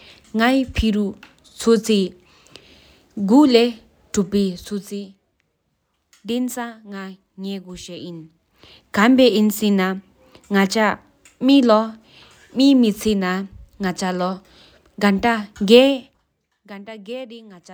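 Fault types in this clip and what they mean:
No technical faults can be heard in this speech.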